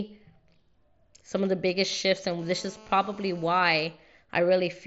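From 1.37 s to 2.33 s, a galloping dit-dit-dit of brief raspy buzzes cuts through the speech, sitting well below the voice. These are GSM signalling bursts: a 2G phone close to the recording chain is exchanging short groups of control transmissions with the network, and the audio circuitry rectifies each radio pulse. The buzz fragments are pitched at about 217 Hz, the GSM frame rate.

At 2.39 s the pattern becomes a continuous hard, harmonic-rich buzz at 217 Hz, about 25 dB below the speech, lasting until 3.8 s. This is GSM phone buzz. The phone has moved from signalling to an active call and now transmits a burst every frame without gaps. The rectified envelope is a steady 217 Hz pulse train unrelated to the speech, which is why it sounds like a gritty drone running underneath. Its top end is held below about 7.7 kHz by the mSBC Bluetooth headset path, which adds only a light graininess of its own.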